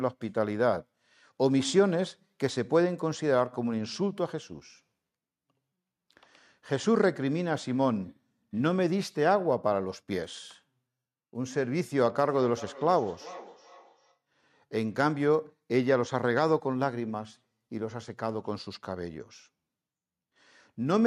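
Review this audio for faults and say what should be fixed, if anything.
From 12.28 to 14.19 s the speech comes back at a steady interval of roughly 0.4 s, peaking about 18 dB below the direct speech: feedback echo between two devices. A second device in the room plays this call aloud, the microphone picks it up again, and no echo canceller removes it. Unlike room reverberation, which smears into a continuous tail, these are distinct repeats. Muting one device's speaker or microphone prevents it.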